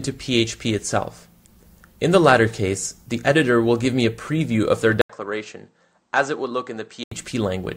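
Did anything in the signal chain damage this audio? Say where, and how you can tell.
Yes. The capture stage likely switched input to a poorer device from 5.01 to 7.12 s. The waveform shows an 80 ms gap and then drops roughly 10 dB, and the spectrogram is empty above 8.4 kHz.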